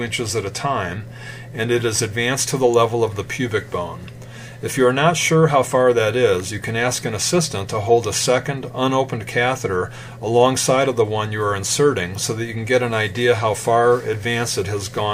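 A nearby switch or motor likely arced into the line, causing electrical switching spikes: sharp snaps at 2.74 s, around -15 dBFS, and 6.40 s, softer at about -20 dBFS.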